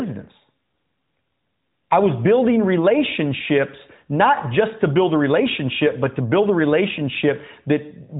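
No faults can be heard in this speech recording, which has the band-limited sound of the AMR narrowband mobile codec, with nothing above 3.8 kHz and only light coding damage that fits its 12.2 kbps mode.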